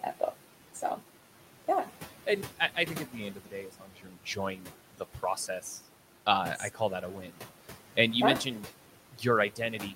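Right from the start there's a DC offset: the whole waveform sits shifted off zero by a constant amount. You won't hear it as such, but it eats into headroom and shows up as a steady lump of energy right at the bottom of the spectrum.

Throughout, there are also noise suppressor artifacts. The suppressor pulls down what it reckons is steady background by about 11 dB, so the room noise, which sits about 19 dB under the speech, dips in the gaps and swells back under the talking.

Between 3.7 and 4.17 s you get speech cut by the noise suppressor. It mistook part of the speech for noise and dragged it down with the background, as much as about 11 dB, over something like 400 ms in total, so that stretch sounds swallowed and faint.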